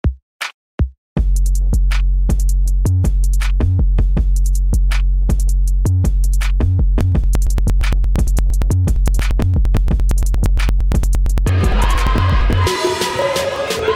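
From 7.01 s to 13.79 s the audio carries periodic USB or driver dropouts: a regular tick roughly every 0.115 s, close to nine per second. Each time the bus or driver stalls, around 10 ms of material is skipped outright rather than filled with silence, so the waveform jumps and clicks. The strict clock-like spacing, audible only where there is signal, is what separates this from randomly timed packet loss or clipping crackle.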